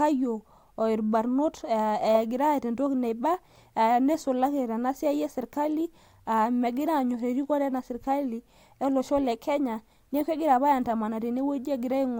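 A speech recording with no technical faults to report.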